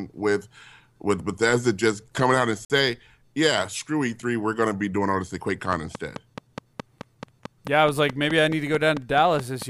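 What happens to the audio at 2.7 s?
A gap between stream segments falls at 2.65 to 2.70 s in the speech, a hole of silence about 50 ms long with hard edges on both sides. The timestamps of two consecutive segments do not meet, which fits a boundary between 6-second segments, and the player fills the missing span with digital silence. The speech simply stops for that instant and resumes exactly where it left off. Nothing is lost; the gap adds about 50 ms to the running time.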